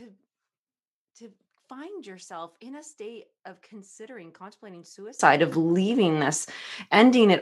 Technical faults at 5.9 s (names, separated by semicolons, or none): none